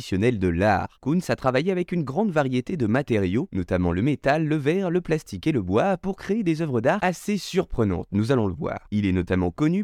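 Brief crackles sit on the loudest moments of the speech: a longer stretch from 1.31 to 1.58 s, short bursts at 2.38 to 2.41 s and 2.95 to 2.97 s, and a single tick at 8.30 s. This is hard clipping. The peaks ran about 1 dB over the available range in the first instance and about 2 dB in the others. Those tops were sliced flat, which adds high harmonics that come through as grit.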